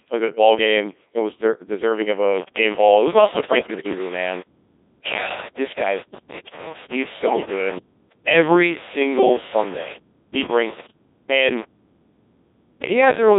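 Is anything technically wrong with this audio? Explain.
Yes, there are two faults.

Codec 2 vocoder, throughout: the speech has passed through this very low-rate digital-radio vocoder, at a rate that fits its 1.6 kbit/s mode, and the damage is heavy. Only pitch, voicing, energy and a spectral envelope are transmitted, and the decoder rebuilds the voice from sine waves rather than keeping the waveform. The result sounds robotic and buzzy, confined to a band from 250 Hz to 3.7 kHz.

Bit errors on digital voice radio, from 3.32 to 3.99 s: corrupted bits reached the vocoder at a rate of around 7 percent. In this vocoder each bit helps set the pitch, level, voicing or spectrum of an entire frame, so a single error distorts a whole stretch of sound. Across this span the synthetic voice jumps abruptly in pitch, level and tone colour.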